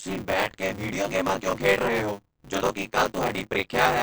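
From the start and through the whole speech clip, the audio has a watery, swirling quality. The cause is likely MP3 compression at a low bitrate, around 36 kbps, where the encoder drops weak frequency components that flicker in and out from frame to frame. On a spectrogram this appears as energy broken into patchy, blinking islands instead of smooth bands.

Buffer tearing also runs throughout. The program writing the playback buffer and the hardware reading it have drifted out of step and now cross partway through every period. About half of each period therefore holds audio from roughly 30 ms earlier, with abrupt joins on both sides. This produces a robotic 100 Hz buzz, which fits a 10 ms buffer period, and it is audible only while sound is present. On a waveform, hard discontinuities repeat every 10 ms. A spectrogram shows vertical striping at that rate.

At 2.91 s, just after "ਰਹੇ ਹੋ ਜਦੋਂ ਕਿ", there is pre-echo. 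A sharp attack lands late in a transform block, so quantisation noise sized for the loud part spreads back across the quiet moment before it. The result is a brief hiss of about 15 ms ahead of the onset, and the attack itself sounds softened. On a spectrogram, a faint broadband smear leads the onset. On a waveform, low-level noise appears just before the attack.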